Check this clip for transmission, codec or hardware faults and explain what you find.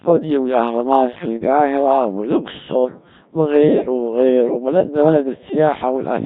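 The speech has been through a Codec 2 vocoder for its whole length, at a rate that fits roughly the 1.3 kbit/s mode, with heavy damage. Only pitch, voicing, energy and a coarse spectral envelope survive, and the decoder rebuilds the voice from sine waves, so it sounds robotic and buzzy. On a spectrogram, harmonics look unnaturally regular and the fine detail is smeared. The waveform no longer matches the original shape.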